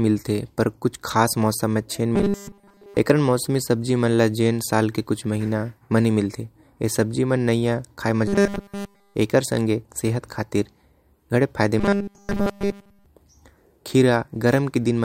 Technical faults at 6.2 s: none

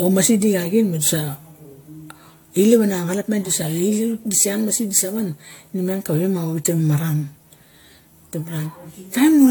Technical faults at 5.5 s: generation loss

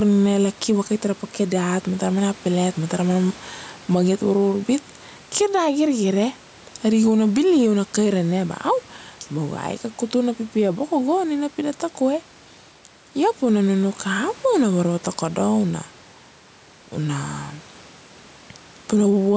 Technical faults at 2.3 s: gain pumping

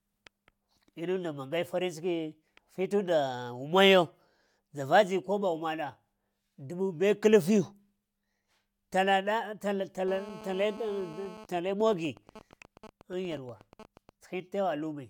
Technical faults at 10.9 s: GSM phone buzz

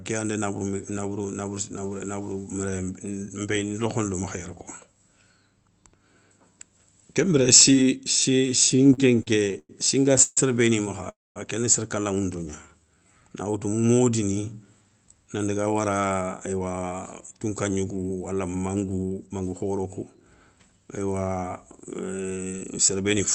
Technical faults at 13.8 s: jitter buffer slow-down

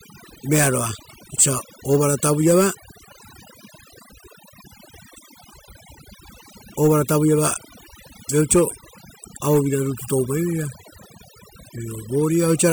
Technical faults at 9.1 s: overdone noise removal

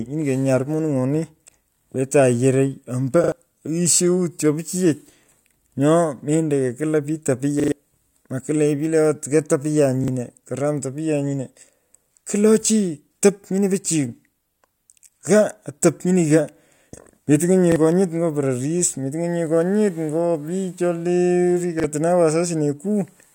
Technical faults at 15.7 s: none

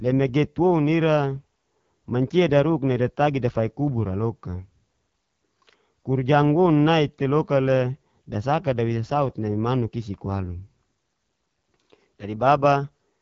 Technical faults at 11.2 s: AMR wideband (HD Voice) codec

